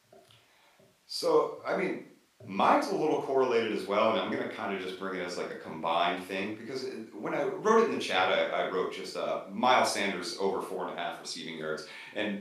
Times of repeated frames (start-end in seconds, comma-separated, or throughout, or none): none